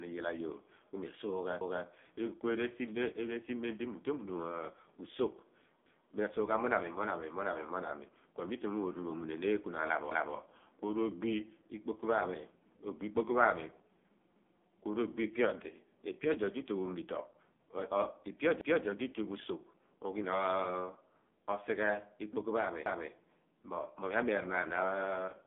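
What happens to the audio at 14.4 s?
From 14.36 to 14.61 s there is an overlapping chunks fault. A new processing chunk begins before the previous one finishes, so 250 ms of speech plays twice. It is heard as a brief stutter with a click at the join. On a waveform the same segment appears twice in a row, with a discontinuity where they meet.

The whole passage also carries heavy AMR narrowband mobile codec damage. The speech sounds buzzy and synthetic, in line with a low rate near 5.9 kbps. It is confined to roughly 200 Hz to 3.5 kHz. A spectrogram shows an empty band above 3.6 kHz.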